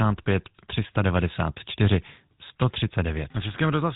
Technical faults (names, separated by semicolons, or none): GSM full-rate codec